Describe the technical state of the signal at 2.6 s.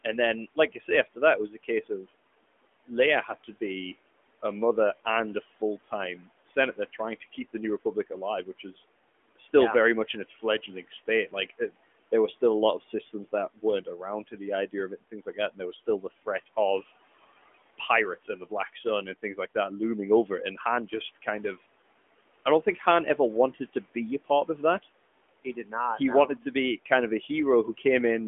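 The noise suppressor is mistaking parts of the speech for background noise during the stretch from 0.04 to 3.49 s, and 2.6 s falls inside it. When it misjudges, it pulls softer speech down along with the room noise by as much as about 17 dB. This is speech cut by the noise suppressor. Across the span, roughly 0.4 s in total is affected, leaving quiet consonants and word endings swallowed or faint.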